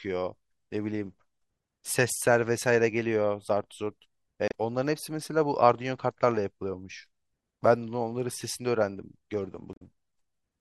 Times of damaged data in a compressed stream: 4.48-4.54, 9.71-9.82

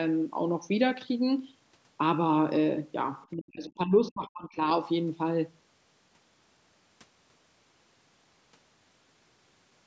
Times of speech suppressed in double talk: 3.34-4.67

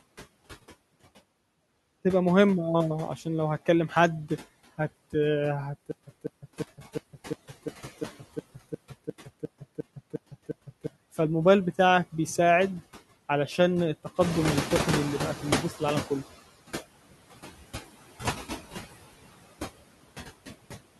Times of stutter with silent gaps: 5.91-10.87

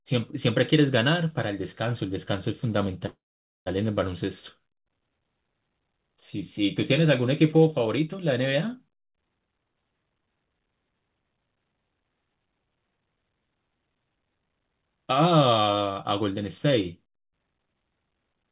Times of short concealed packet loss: none

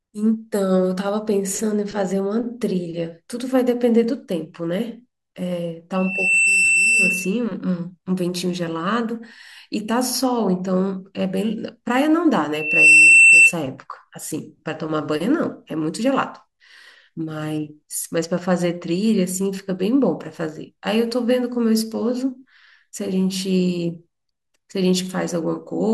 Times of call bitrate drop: none

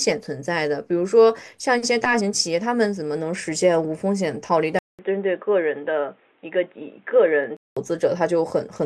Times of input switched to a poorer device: 4.79-7.77

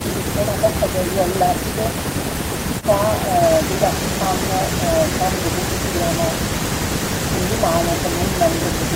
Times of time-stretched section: none

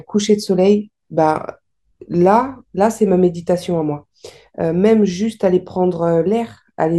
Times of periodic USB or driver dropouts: none

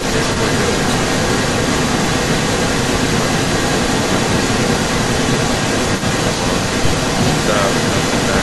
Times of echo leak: 0.00-8.43

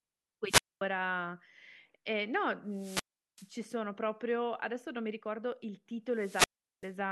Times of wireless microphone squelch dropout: 0.46-0.81, 2.70-3.54, 6.13-6.97

